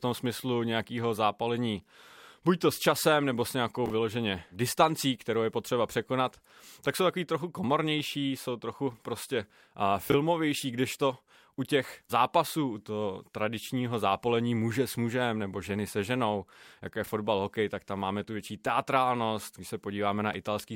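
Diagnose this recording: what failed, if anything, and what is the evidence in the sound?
Jumbled hiccups at 3.86, 10.1 and 17.04 s reveal chunks out of order at the buffer stage: one 20 ms block played a chunk late, leaving hard joins.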